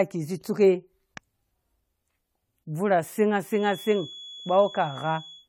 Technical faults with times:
0.00-5.48 generation loss
3.49-5.48 feedback whistle

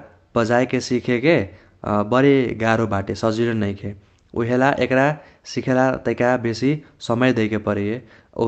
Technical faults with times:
none

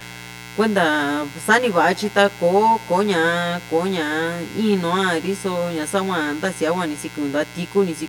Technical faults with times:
0.00-8.09 mains buzz
0.00-8.09 channel delay (comb filtering)

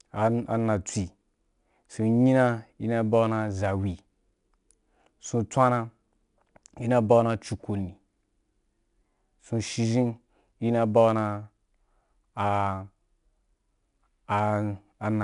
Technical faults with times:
0.00-15.23 4-bit ADPCM compression

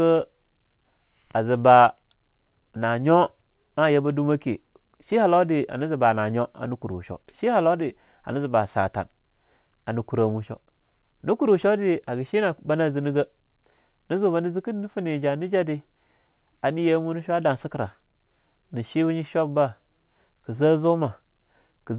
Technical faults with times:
none

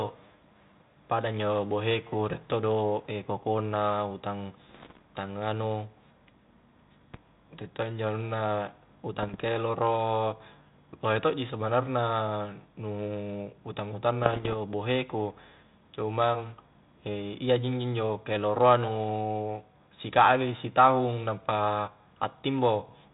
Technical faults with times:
4.69-5.02 bit errors on an ADPCM link
9.23-9.42 bit errors on an ADPCM link
14.23-14.55 bit errors on an ADPCM link

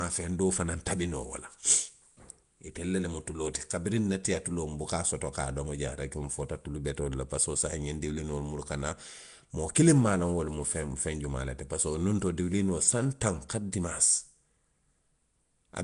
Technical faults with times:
0.00-15.84 Nellymoser compression

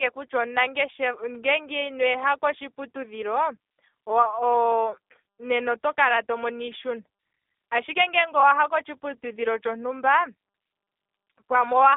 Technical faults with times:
0.00-11.97 G.729 codec

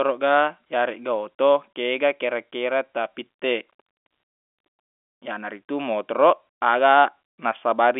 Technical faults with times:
none

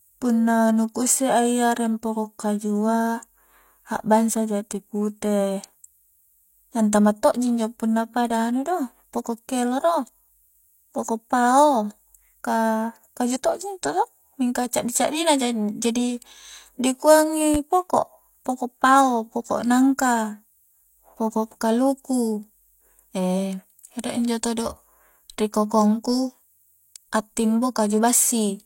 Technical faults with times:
17.54-17.58 loud pop

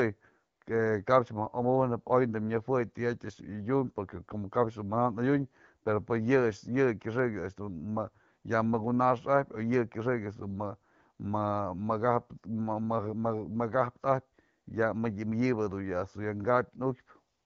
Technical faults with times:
none

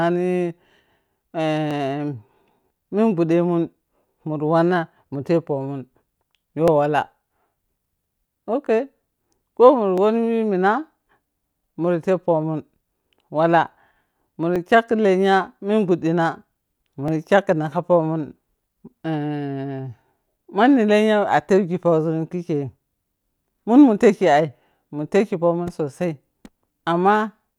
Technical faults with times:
1.71 dropped samples
6.68 dropped samples
9.98 dropped samples
14.56 dropped samples
17.08 dropped samples

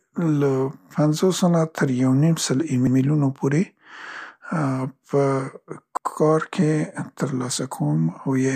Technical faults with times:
2.87-2.97 overlapping chunks
5.97-6.07 overlapping chunks

